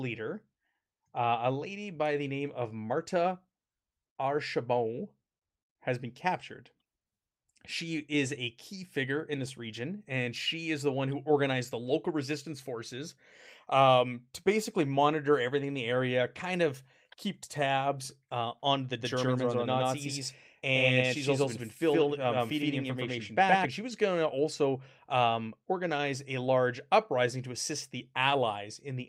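A doubled audio track runs from 19.01 to 23.65 s: the speech is heard twice, a second full-band copy trailing the first by roughly a tenth of a second at about equal loudness, so every syllable gets a hard, slap-like repeat. The copy carries no decay or room colour and cuts in and out abruptly at both ends. The likely cause is the same signal reaching the mix a second time through a slower path.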